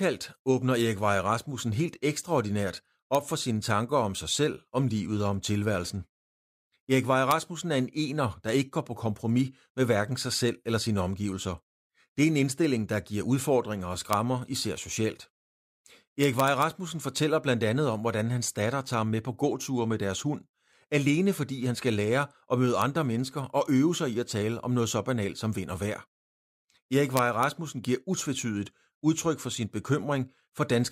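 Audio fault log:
3.15 s, 7.31 s, 14.13 s, 16.24–16.62 s, 22.82 s, 27.17–27.43 s: integer overflow. Loud speech peaks wrap to the opposite sign instead of limiting, causing violent cracks. The waveform shows full-range sign flips, and the spectrogram shows broadband vertical streaks.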